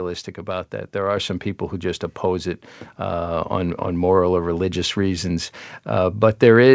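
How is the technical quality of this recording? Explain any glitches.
The recording has one clear glitch: a microphone volume step-up at 1.17 s. The call software judged the input too quiet and raised the microphone gain in one jump, so voice and background both become louder by about 5 dB. The audio also passed through a call path whose band ends at 8 kHz, consistent with a G.722 wideband codec.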